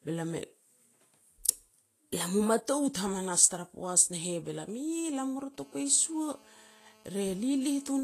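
Throughout the speech there is plainly audible codec damage, likely Vorbis compression at a low bitrate, fitting roughly 32 kbps. Coarsely quantised treble turns to hissy, grainy noise and attacks blur. On a spectrogram, energy stops flat at about 14.2 kHz, with speckled, patchy upper bands.

From 1.02 to 2.73 s the audio plays 5.9% fast, likely from a drift correction step in clock-matching software that changed the playback rate in one jump. Pitch rises about 99 cents, nearly a semitone, then snaps back. Spectrogram harmonics shift upward as a block, with sharp edges.

From 4.60 to 5.56 s come GSM signalling bursts: short groups of 217 Hz buzzes in a galloping dit-dit-dit, well below the speech. A nearby 2G phone's radio pulses are being rectified by the audio circuit. A spectrogram shows brief vertical stacks of evenly spaced harmonics in clusters.

From 5.60 to 7.99 s a steady GSM phone buzz follows as the phone enters a call. 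It is a hard, raspy 217 Hz tone with many harmonics, about 30 dB below the speech and unrelated to it. A spectrogram shows continuous horizontal lines at 217 Hz multiples, and the waveform carries a regular pulse train.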